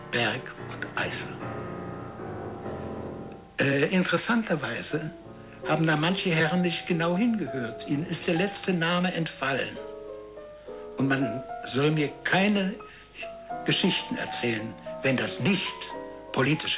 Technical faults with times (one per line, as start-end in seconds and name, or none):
none